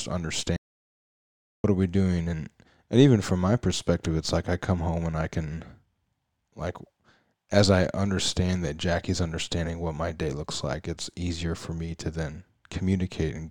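An audio dropout to silence runs from 0.56 to 1.64 s. The speech cuts off into silence with no room tone for about 1.08 s, then resumes mid-flow at "are we doing and". The input was likely lost briefly while silence was written.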